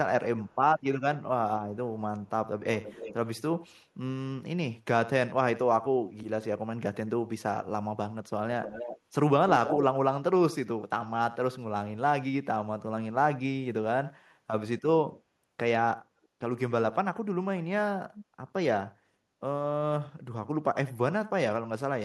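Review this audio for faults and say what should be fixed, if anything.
Echo leak at 0.45, 2.25, 2.75, 3.66, 8.63, 9.46 and 18.16 s returns the speech 273 to 320 ms late, ranging from faint to nearly full level around 9.5 s. Unlike reverb's smeared tail, it is a distinct delayed repeat, likely loudspeaker pickup an echo canceller missed. A headset or better-tuned echo cancellation at that end would prevent it.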